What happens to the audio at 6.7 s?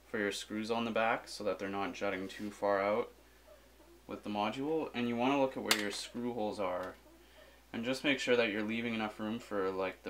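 At 6.7 s the audio is intact, with no dropout, glitch or other fault at that moment.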